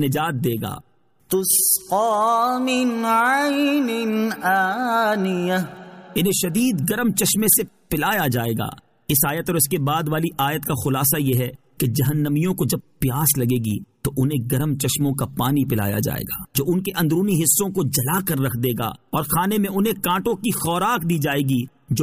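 No technical faults are audible anywhere in this clip.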